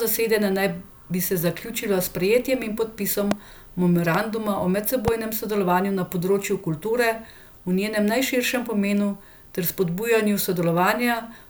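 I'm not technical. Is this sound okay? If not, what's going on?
No. Something in the recording chain, likely a loose plug, a switch or a brief electrical glitch, sent sudden jolts of voltage into the signal. Each jolt is a loud pop: a sharp, short crack lasting a fraction of a second, sitting on top of the speech, which carries on underneath. There are three, from 3.31 to 3.34 s, 4.15 to 4.17 s, and 5.08 to 5.10 s. The first is the loudest.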